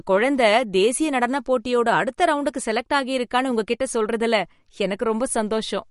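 Throughout the speech, the treble stops dead at about 11.2 kHz. Nothing sounds above that line. The s sounds turn swirly and metallic. The sound has a watery, shifting texture. The damage is plainly audible. The likely cause is MP3 compression at a low bitrate, around 48 kbps to judge by the sound. Short of bits, the encoder cuts the top band and drops weak frequency lines. Those lines flicker on and off from frame to frame.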